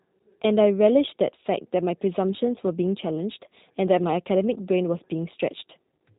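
Throughout, the speech is cut off above 4 kHz and sounds plainly rough and synthetic, the mark of G.729 codec compression, consistent with an 8 kbit/s VoIP stream.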